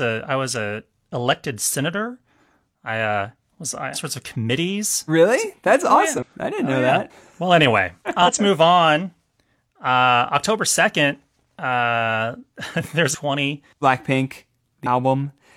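Speech with five short bursts of damaged data in a compressed stream, at 3.90–3.97, 6.18–6.24, 8.22–8.29, 13.10–13.16 and 14.82–14.87 s. Each lasts about 50–65 ms. Corrupted bytes make the decoder misread frames, lose sync and hunt for the next valid header.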